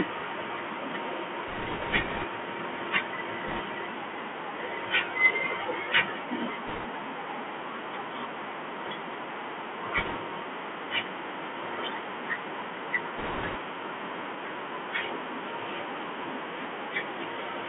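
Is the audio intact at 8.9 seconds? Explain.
No. At 8.9 seconds, as throughout the speech, a Bluetooth CVSD headset codec is at work. Each sample is reduced to a single up-or-down bit with an adapting step size, which fits a 64 kbps narrowband link, and the line passes only about 200 Hz to 3.4 kHz. The speech sounds thin and boxed-in, s sounds are scratchy, loud bright moments distort as the step falls behind, and a granular hiss sits underneath.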